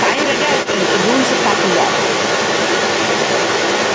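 A short speech recording carries the other side's voice leaking through from 0.00 s to 3.94 s: a second voice runs under the main talker for the whole clip, roughly as loud as the speech itself. The likely cause is residual echo, where the far end played on a loudspeaker and was not fully cancelled. Unlike room reverberation, which smears the same talker, this is a distinct, separate voice, heard within the call's band up to 8 kHz.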